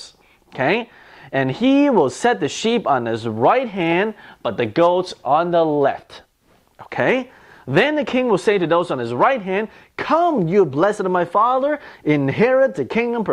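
Listening through the audio, nothing stood out as a technical problem at any point.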